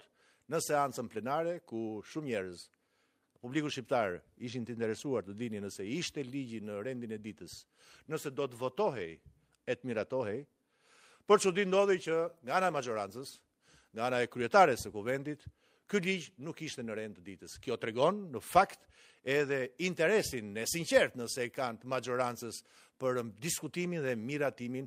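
From 8.55 s to 14.15 s the audio turns coarse and rough, with a smeared, watery texture lasting about 5.5 s. This is a call bitrate drop: the encoder was given far fewer bits, consistent with a fall from 64 to 28 kbps.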